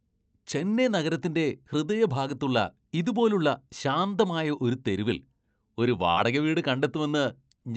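At 6.11 s the speech briefly stalls into a smeared, held sound that fades for roughly 50 ms, then picks up at 6.19 s with about 40 ms of the utterance gone. This is a burst of packet loss: several consecutive packets never arrived in time, so the receiver stretched and faded the last good sound to cover the hole before skipping ahead. Through the Opus call path, the audio stays band-limited to about 8 kHz.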